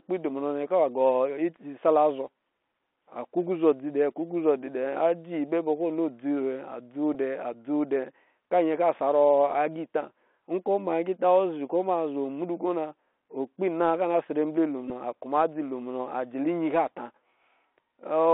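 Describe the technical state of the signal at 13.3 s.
At 13.3 s the speech is still passing through the Bluetooth CVSD headset codec that colours the whole clip. The band runs only from about 250 Hz to 3.5 kHz, and the one-bit up-or-down coding, which fits a 64 kbit/s stream, leaves a granular hiss and scratchy s sounds where loud, fast changes outrun the step size. Plain band-limiting would sound muffled but clean, and a perceptual codec would sound swirly rather than grainy.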